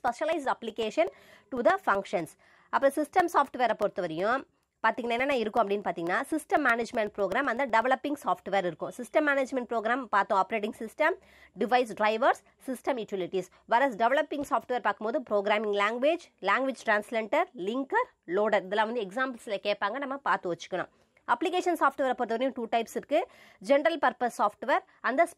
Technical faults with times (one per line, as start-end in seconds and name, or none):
0.08-7.82 periodic USB or driver dropouts